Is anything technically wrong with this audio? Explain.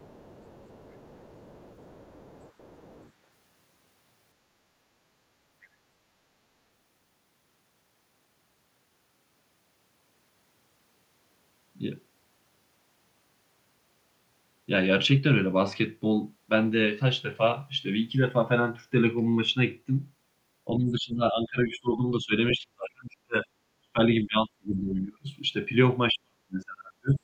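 Yes. From 0.0 to 3.11 s, and again briefly at 5.62 s, the other side's voice leaks through. It sits faintly beneath the talker, about 30 dB down and then about 35 dB down. This is likely residual loudspeaker echo the canceller missed. On a spectrogram it shows as a weak, separate harmonic pattern under the main speech.

Speech suppressed in double talk follows from 20.78 to 22.33 s, 22.57 to 23.47 s, 23.82 to 23.99 s, 24.23 to 25.27 s and 26.12 to 27.23 s. The talker's voice dips by roughly 20 to 40 dB, deepest near the end. This is likely the canceller ducking everything while both sides spoke. The waveform shows abrupt envelope collapses.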